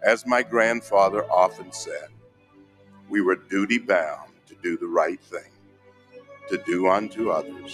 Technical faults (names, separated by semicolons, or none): noise suppressor applied to music or sounds; sound cut by the noise suppressor